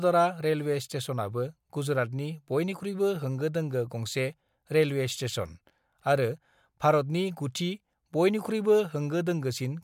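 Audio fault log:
No faults heard anywhere in this speech recording.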